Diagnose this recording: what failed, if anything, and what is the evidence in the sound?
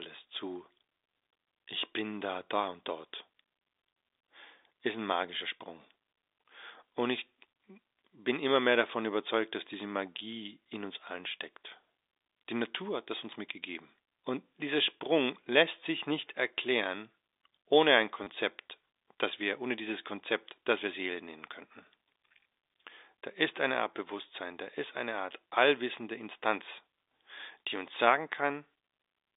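The fault is network packet loss with the last packet repeated. Right after "nicht erklären ohne ein", at 18.24 to 18.27 s, a 30 ms stretch stutters robotically. That fits three 10 ms packets lost. The receiver replayed the last packet through the narrow G.711 telephone band.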